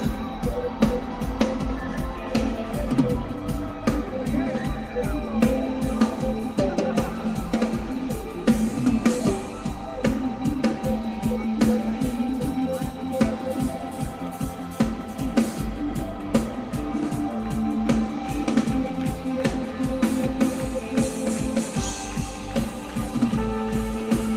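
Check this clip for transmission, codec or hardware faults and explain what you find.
Nothing in this recording points to a transmission, codec or hardware problem; the signal stays continuous and steady throughout.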